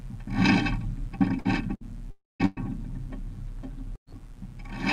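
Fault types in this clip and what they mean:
Mains buzz: switching spikes from a dimmer, rectifier or poorly shielded line, repeating twice per cycle of the 60 Hz supply, leave a raspy, steady buzz of harmonics reaching into the kilohertz range. It sits under the whole clip, about 35 dB below the signal.
Burst of packet loss: short runs of lost or late audio, about 60 ms at 1.39 s and 1.75 s and about 120 ms at 2.46 s and 3.96 s. The receiver stretches the last sound into a fading buzz or hiss, then resumes later, skipping what was lost.
Long network dropout: from 2.11 to 2.43 s about 300 ms of audio is missing, likely from a network stall. The last sound is held and fades, then goes silent for its final stretch before the audio returns further along, with the lost portion gone.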